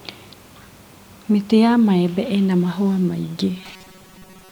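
From 3.56 s to the end, just after "maembe ĩna mahũa maingĩ", the speech turns into a rigid metallic buzz at 188 Hz that loosely follows the words. This robotic sound from repeated short buffers likely comes from starved input looping a 5.3 ms chunk for most of that stretch.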